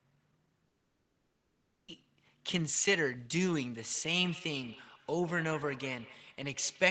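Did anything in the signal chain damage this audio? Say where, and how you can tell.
Yes. The first fault is at the network stage, from 0.67 s to 1.89 s. The sound breaks off at 0.67 s. For roughly the first quarter-second the receiver stretches the last sound into a fading buzz, then about 0.94 s of silence follows. Speech resumes at 1.89 s with the full 1.21 s simply gone, not delayed. That pattern is a long network dropout, likely a run of packets lost in transit, far too long for concealment to cover.

The second fault is acoustic coupling around the call path, from 3.8 s to the end of the clip. Each stretch of speech is followed by a repeat roughly every 150 ms, thinner and more ringing each time. The loudest repeat sits about 17 dB below the speech. This is feedback echo between two devices: a second device in the same room plays the call back, and the first microphone re-captures it. 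Its echo canceller only removes what its own loudspeaker plays, so it does not subtract this copy.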